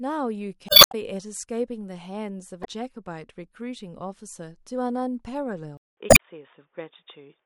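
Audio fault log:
0.66–0.95 s, 2.61–2.67 s and 6.08–6.20 s, damaged data in a compressed stream: each is a brief chirp, squawk, click or short hole. Corrupted bytes make the decoder misread those frames, lose sync, and jump to the next valid frame header before playback continues.
5.77–7.45 s, input switched to a poorer device: after a gap of about 200 ms the sound turns dull and boxy, with nothing above 3.6 kHz, a level shift of about 5 dB and a faint new noise floor. The cause is likely a change to a narrower-band microphone or headset call profile.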